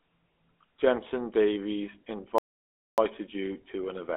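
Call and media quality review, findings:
GSM full-rate codec, throughout: buzzy, gravelly speech, band about 250 Hz to 3.4 kHz, nothing above 4 kHz. Pulse-excited vocal-tract model; fits a 13 kbps stream.

Playback stall, 2.38–2.98 s: audio goes silent mid-flow for 0.6 s, then resumes. Likely a player buffer underrun or blocked output thread.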